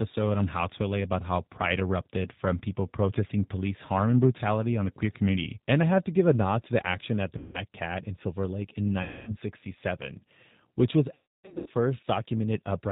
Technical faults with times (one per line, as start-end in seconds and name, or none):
0.00-12.92 G.729 codec
7.38-7.60 VoIP packet loss concealed by the speech codec
9.03-9.37 VoIP packet loss concealed by the speech codec
11.14-11.68 VoIP packet loss concealed by the speech codec